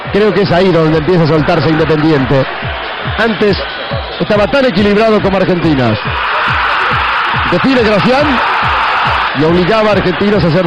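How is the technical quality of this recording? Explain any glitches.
No glitches turn up anywhere in the recording. There is nothing here that needs a technical explanation.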